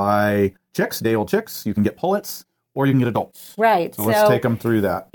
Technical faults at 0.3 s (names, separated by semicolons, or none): time-stretched section